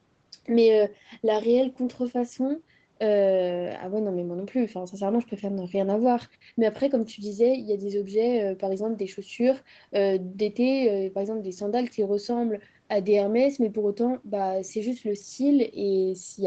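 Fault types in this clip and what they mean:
Nothing's gone wrong here; the speech simply comes through a normal call chain, so it tops out at 8 kHz the way a call usually does.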